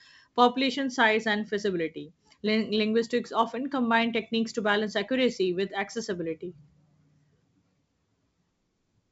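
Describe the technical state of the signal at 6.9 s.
At 6.9 s the speech is intact, carried cleanly through G.722 wideband telephone coding at 64 kbit/s, with no fault at that moment.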